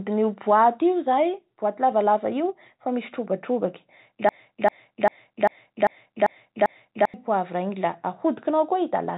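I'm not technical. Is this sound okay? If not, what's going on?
No. Clock drift between sender and receiver runs through the whole clip: the sending device's clock ticks roughly 4 percent fast, so audio arrives quicker than it's played.

Repeated timing corrections, from 0.09 to 9.06 s, trim small slivers to keep up, so the speech sounds slightly rushed, at 104 percent speed, with faint uneven hiccups.

A broken-record loop, from 4.29 to 7.14 s, repeats one 0.39-second fragment seven times back to back, likely because the stream stalled, and the speech meant for that stretch is lost.

The sound also comes through a phone-style call line that carries nothing above 4 kHz.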